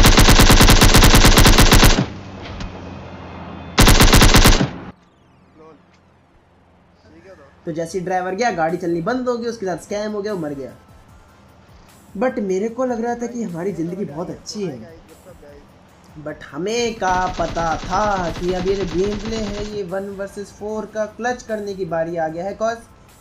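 From 0.06 to 1.87 s the loudest peaks break into harsh, violent cracks. This is integer overflow: the signal was driven about 2 dB past the largest value the integer format can hold. It was not limited there. Each peak over that ceiling wrapped around to the opposite extreme. The sound jumps across the full range instead of flattening, so the cracks are far sharper than clipping. The same fault returns from 3.80 to 4.49 s with about 1 dB of overdrive, giving similar sharp cracks on the peaks.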